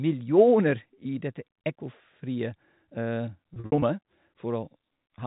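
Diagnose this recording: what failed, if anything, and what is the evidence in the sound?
The network stage dropped packets between 3.54 and 3.82 s, and the receiver concealed them with packet loss with pitch repetition. About 160 ms went missing, scattered across that 280 ms stretch as short gaps. The longest gap is 60 ms, and the pattern fits roughly eight 20 ms packets. Each gap is bridged by looping the last pitch period, so the speech briefly holds on a slightly buzzy, frozen tone before resuming. All of this stays within the 4 kHz band of the G.711 telephone coding.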